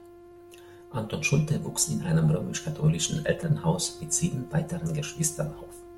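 At about 3.43 s the program likely failed to fill its output buffer in time, leaving a block of digital silence roughly 1.45 ms long, which fits a single 64-sample block dropped to zeros. Because the speech cuts straight to silence and back with no fade, each edge produces an abrupt discontinuity. The gap is far too short to hear as a hole. It comes across as a brief tick laid over the speech.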